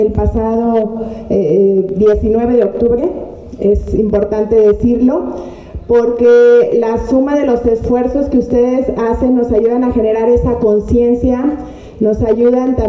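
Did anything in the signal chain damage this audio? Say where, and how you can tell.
No, nothing audible points to damage at any stage of the signal chain.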